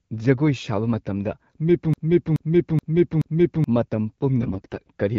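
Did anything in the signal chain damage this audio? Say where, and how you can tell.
Yes, two spots. Right after "ꯁꯥꯕ ꯃꯇꯝꯗ", from 1.94 to 3.64 s, there's a broken-record loop: the same 0.43 s slice plays four times back to back, identically. That's most likely a stalled player or stream buffer re-sending its last fragment, so the audio meant for that stretch is gone.

Then from 4.41 to 4.88 s you get AMR bit errors. The speech keeps roughly its pitch and level but goes hoarse and gargly, as if about a tenth of the bits in the less protected parts of the AMR-WB frames got flipped on a weak radio link. The codec itself, consistent with 12.65 kbit/s, shows only light coding damage.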